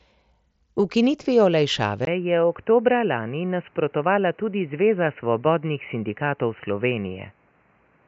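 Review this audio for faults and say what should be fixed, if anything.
At 2.05 s the sound drops out for about 20 ms. From there to the end, nothing passes above 3 kHz, against about 7.7 kHz before. It turns boxy, about 5 dB quieter, with faint new background noise. The input likely switched to a poorer device. Lock the recording input to one device, and keep the headset from changing profiles mid-session.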